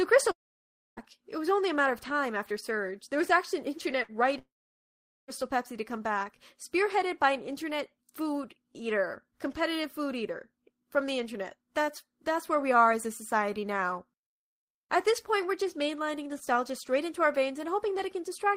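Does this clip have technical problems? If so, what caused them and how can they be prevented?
Yes. A likely long network dropout stopped audio arriving at 0.31 to 1.00 s and 4.38 to 5.31 s. The receiver briefly stretched the last sound, then left near-silence, losing about 0.66 s and 0.9 s of speech. A steadier connection with more bandwidth headroom and a larger jitter buffer would prevent this.

A burst of packet loss at 4.03 to 4.11 s dropped about 60 ms. The receiver held and faded the last sound, then resumed past the missing part. Forward error correction or packet redundancy would prevent this.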